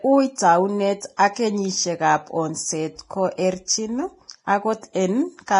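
Speech runs with a hissy, grainy texture throughout, the treble roughened and replaced by noisy fizz. The likely cause is heavy Vorbis compression: the encoder has pulled its cut-off down and quantised the upper bands so coarsely that fine detail turns into noise of similar energy, which fits a low bitrate of roughly 28 kbps. A short pre-echo appears from 1.17 to 1.19 s, between "wuuy taakunet" and "ak kenyisiekap onset". A short hiss of about 21 ms leads into a sharp onset, and the attack itself sounds softened and smeared. This happens because the transform block containing that attack has its quantisation noise spread across the whole block, so noise sized for the loud onset also fills the quiet moment just before it.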